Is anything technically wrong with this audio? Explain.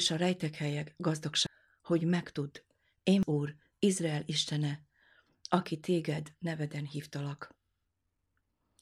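Yes. At 1.47 s and again at 3.23 s the speech shows damaged data in a compressed stream. At each point some bytes of the encoded stream were corrupted, so the decoder could not read the affected frame correctly, lost its place in the stream and had to hunt for the next valid frame header before resuming. Each time this is heard as a brief, unnatural blip or chirp cutting into the speech.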